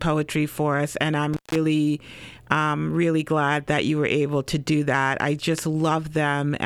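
At 1.33 s an intermittent contact briefly opens the line: the speech drops out for about 0.15 s. A loose connection makes crackly edges, visible as a gap with vertical spikes in the waveform.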